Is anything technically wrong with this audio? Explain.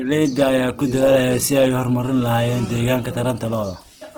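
Yes. Opus compression damage runs through the whole clip. The speech sounds rough and grainy, with noisy tones, likely from Opus in its music (CELT) mode at a low rate, around 16 kbps. Starved bands keep their energy but are refilled with folded copies or noise. A spectrogram shows speckled, smeared harmonics, with few holes and content reaching 20.4 kHz.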